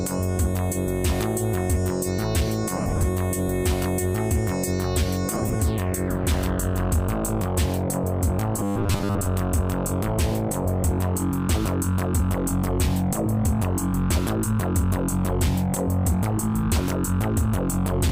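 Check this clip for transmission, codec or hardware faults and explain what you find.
Two kinds of trouble here: dropped LE Audio frames in two spots, and a stretch of robotic buzzing.

Lost LE Audio frames at 2.77–3.03 s and 5.35–5.55 s: about 150 ms and 100 ms went missing in scattered bursts, the longest around 50 ms. The LC3 decoder fills gaps with the last spectrum and random signs, so tones smear into a noisy wash.

Robotic sound from repeated short buffers at 8.59–9.27 s: a rigid, metallic 100 Hz buzz sets in, with most of the audio being repeats. That's likely the player looping its last 10 ms buffer while fresh data arrives too slowly.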